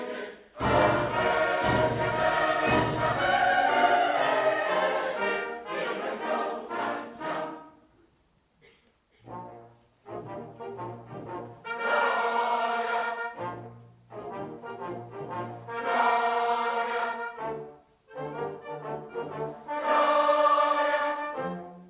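No technical faults can be heard anywhere in the clip. It comes through a call path coded with G.711 A-law, and as that codec does, it carries nothing above 4 kHz, giving the narrowband sound of an ordinary telephone line.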